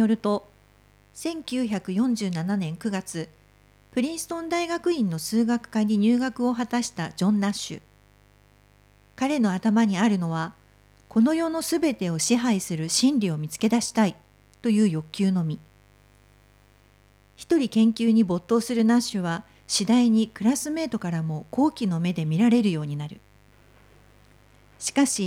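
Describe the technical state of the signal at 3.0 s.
Mains buzz is present at 3.0 s, and it runs through the whole clip rather than starting or stopping near that moment. Sharp switching spikes, of the kind a dimmer, rectifier or unshielded cable lets in, arrive twice per 50 Hz cycle and spread energy across a stack of 50 Hz harmonics reaching up into several kHz. The result is a steady, raspy buzz sitting roughly 35 dB below the speech.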